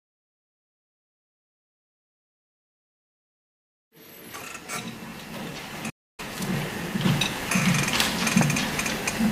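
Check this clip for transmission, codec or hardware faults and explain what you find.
There's one fault here, a playback stall. From 5.89 to 6.20 s the sound cuts to silence for about 0.29 s, then carries on, likely because the player ran short of data.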